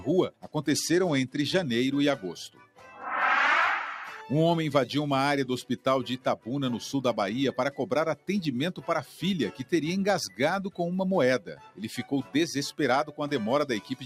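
A noise suppressor applied to music or sounds is left running across the whole clip. It was built for speech, so it treats steady tones, ambience and reverb as noise. Its gain rises and falls by about 5 dB. Sudden onsets pass mostly intact. Held sounds and decaying tails sink. The result is a pumping and thinning that never settles. Nothing here is noise being removed. The processing is simply acting on the wanted sound itself.

There are three moments of sound cut by the noise suppressor. They fall at 0.31 to 0.52 s, 2.49 to 2.86 s and 11.4 to 11.8 s. Each dips by up to about 12 dB. The first lasts about a fifth of a second, the others about 0.4 s. In each case a sustained or fading part of the sound was judged to be noise and pulled down. Its level drops and its decay is cut short.

From 0.71 to 1.63 s there is a Bluetooth SBC bit pool drop. The treble dulls suddenly and a gritty, grainy noise rises beneath the sound. 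The quality recovers after about 0.9 s. This points to a congested wireless link. The sender cut the encoding budget, which fits a bit pool falling from 31 to 15, near 105 kbps. With fewer bits, the highest sub-bands get little or nothing. The remaining bands are quantised coarsely, and that produces the grit.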